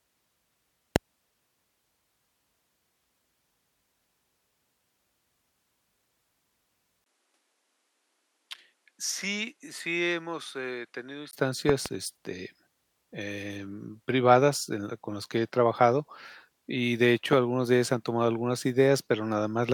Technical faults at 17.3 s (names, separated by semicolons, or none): loud pop